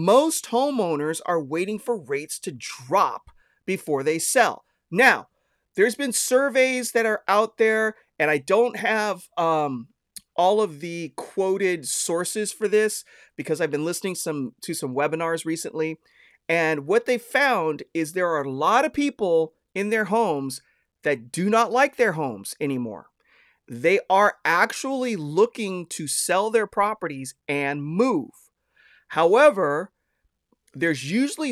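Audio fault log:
No faults are heard anywhere in this speech recording. Nothing in it calls for a timed entry.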